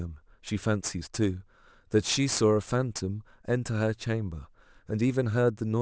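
Aliasing runs throughout: content above the 8 kHz fold reflects back downward, roughly 20 dB below the speech, consistent with an unfiltered drop to 16 kHz, making sibilants gritty and metallic.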